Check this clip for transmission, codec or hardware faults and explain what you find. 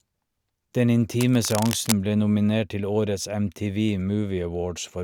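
One hardware fault is audible. From 1.17 to 1.96 s there is cable scratch noise: dense, irregular crackling about 10 dB below the speech, most likely from a worn cable or connector whose contact resistance fluctuated as it moved. Unlike isolated digital clicks, the bursts cluster unevenly into a rustling texture.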